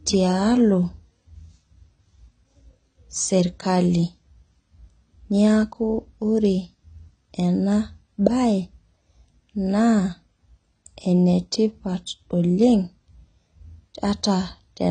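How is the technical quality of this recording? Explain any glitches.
Technical quality is compromised by plainly audible codec damage throughout the speech. It sounds dull and smeared, with nothing above about 9 kHz and a warbling, fizzy texture on sustained sounds and sibilants. The likely cause is AAC compression, specifically AAC-LC at a rate consistent with around 24 kbps. With so few bits, the encoder discards the top of the spectrum and coarsely quantises what remains frame by frame, so detail blurs and smears.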